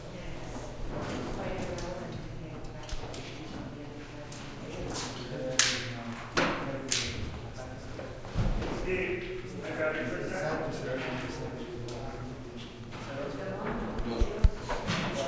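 Nothing technical stands out in this recording of everyday sounds; there's no fault here worth flagging.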